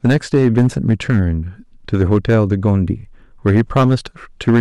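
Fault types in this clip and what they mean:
Hard clipping: the speech reaches a stage at about 8 dB more level than it can pass, so every peak above its ceiling is sliced flat. Only a few percent of the waveform is cut this way, but those squared-off tops add harmonics high up the spectrum, heard throughout the clip as a gritty crackle riding on the louder syllables while quieter passages stay comparatively clean.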